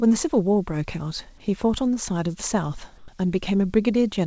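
A speech recording carried over a call link. Nothing reaches above 8 kHz, which fits a wideband codec such as G.722. From 2.98 to 3.08 s, a 100 ms stretch of background is replaced by comfort noise. The real room sound gives way to a smooth, featureless hiss. It sits about 3 dB lower than the background around it, which itself is about 31 dB below the speech. The likely cause is discontinuous transmission. The sender stopped sending, and the receiver filled the gap with synthetic noise.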